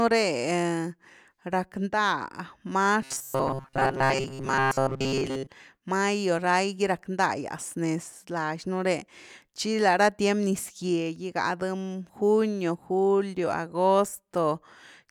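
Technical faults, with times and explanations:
3.02 to 5.48 s, robotic sound from repeated short buffers: the speech becomes a rigid metallic buzz near 134 Hz, ending before "mayo lai gy rack". Likely, audio arrived too seldom, so a chunk of about 7.5 ms was looped, replacing most real signal.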